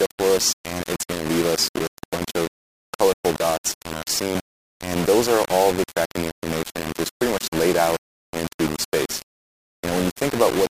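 Throughout, the sound is grainy and gritty, with error riding about 10 dB below it. The likely cause is low bit depth without dither, rounded to roughly four bits.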